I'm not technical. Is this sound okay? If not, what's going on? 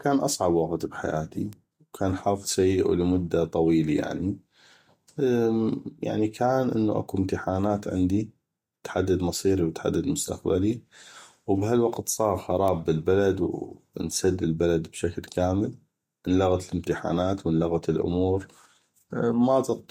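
No. Two sharp little ticks pop out of the speech, one at 1.53 s, right after "اصعب وقت بحياتي", and another at 12.68 s, just after "وبهالوقت صاغ". Each is a bit error spike. Somewhere in the digital chain, a single bit in the stored numbers got flipped, so the sound wave jumped abruptly for an instant and snapped back. The tick is far too brief to match the speech, which is why it sounds like a crisp, separate click.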